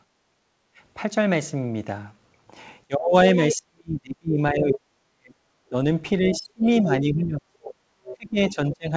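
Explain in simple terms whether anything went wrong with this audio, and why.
Yes, a few things went wrong, all from the echo canceller on what sounds like a call.

At the very start, from 0.07 to 0.79 s, the quiet room sound behind the speech dips noticeably and then comes back. This is background gated by the echo canceller. While the loudspeaker on the talker's end was playing, the canceller turned the microphone down to keep the playback from getting back in. The room sound sagged for about that stretch and returned once it let go.

From 2.87 s to almost the end, at 8.88 s, the talker's speech keeps fading, sometimes nearly to silence, across about four seconds in total. This is speech suppressed in double talk. The likely cause is that both sides were talking at once, and the canceller couldn't tell the talker's speech apart from the loudspeaker echo. It turned everything down, so the talker's own speech got cut away in pieces.

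A second voice also slips through at 3.51 to 3.55 s, 6.29 to 6.39 s and 8.04 to 8.51 s. The first scrap is fairly loud and the other two are quieter. This is the other side's voice leaking through. Most likely the talker's device played the far end aloud, and the canceller didn't manage to scrub all of it from the microphone. The last scrap lasts about half a second.

Throughout, the sound stops short of the top end, with nothing above 8 kHz, which fits a call codec.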